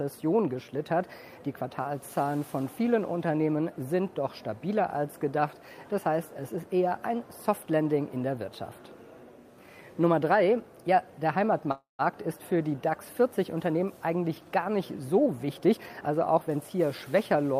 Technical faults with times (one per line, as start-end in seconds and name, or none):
11.71-12.02 call audio freeze
15.26-16.81 jitter buffer speed-up